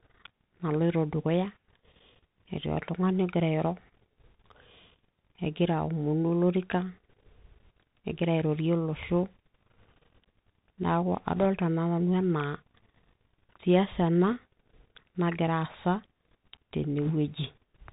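Throughout the speech, the Bluetooth CVSD headset codec is plainly audible. The band stops at 4 kHz, so the sound is thin and boxy, and a granular hiss runs under everything. The codec describes the waveform one bit at a time, only whether it steps up or down, with an adaptive step size. This fits a 64 kbps narrowband link. Loud, bright moments outrun that step and distort, and s sounds come out scratchy. A spectrogram shows a hard ceiling at 4 kHz with a speckled noise floor beneath the speech. The waveform looks slightly jagged where slopes are steep.

Bit errors on a Bluetooth voice link appear as three short bursts, at 11.36–11.46 s, 14.29–14.36 s and 17.05–17.12 s. Each lasts under a tenth of a second. Flipped bits on the CVSD link each nudge the signal by one step, which grows with the speech level, and the error decays quickly, so there are no sharp clicks. Instead a brief rushing crackle rides on the speech. 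The error rate is around one to two percent, a little lighter in the middle burst. On a spectrogram each burst is a vertical smear of broadband noise below 4 kHz, and the waveform shows a fuzzy thickening.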